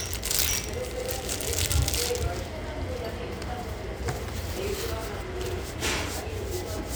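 No technical faults can be heard in this recording of sounds. Nothing in it calls for a technical explanation.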